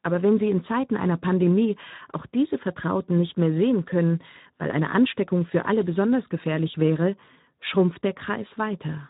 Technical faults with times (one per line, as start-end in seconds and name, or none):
0.00-9.10 Speex codec